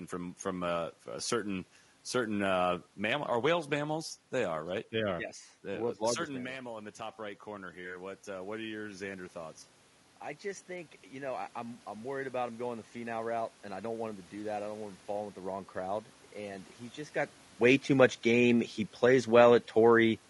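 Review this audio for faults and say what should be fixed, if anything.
Throughout the speech there is a rough, grainy texture with noise filling the gaps between harmonics and a thin, synthetic-sounding top band. This is likely low-delay AAC compression (AAC-ELD) at a bitrate around 32 kbps, whose short frames resolve pitch harmonics poorly. On a spectrogram, harmonic stripes look smeared, with noisy fill between them and a blocky upper band. Raising the bitrate or using a longer-frame codec would prevent it.

From 6.31 to 9.64 s the automatic gain rising fault appears. After the talker moves away around 6 s and the input drops by about 13 dB, the control lifts its gain by about 6 dB over three seconds, ending just before "I just". Voice and room noise swell together. The waveform envelope, background included, ramps upward across that span. Using a faster-settling gain control, or a steadier microphone distance, would prevent it.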